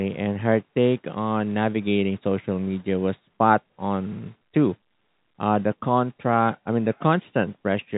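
No technical faults can be heard in this speech clip. It comes through G.711 telephone coding working as expected, with nothing above about 3.8 kHz and the narrow, band-limited sound of a fixed-line call.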